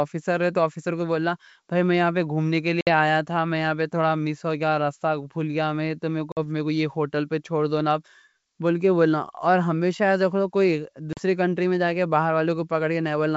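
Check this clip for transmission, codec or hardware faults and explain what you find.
Three dropouts are audible, all from packet loss on an ADPCM call; the G.722 wideband coding carrying the speech shows faint or no damage. The gaps fall at 2.81–2.88 s (about 60 ms lost), 6.32–6.39 s (50 ms) and 11.13–11.20 s (40 ms, just before "کنٹری میں جا کے"). Each hole is a hard-edged silence where a handful of packets went missing. The decoder's adaptive predictor and step size then disagree with the sender's, so speech resumes with brief distortion before resynchronising.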